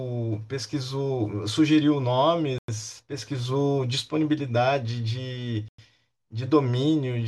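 At 2.58 s and 5.68 s the speech breaks off for 100 ms. This is a gap between chunks: silence inserted between 3-second blocks, heard as short holes.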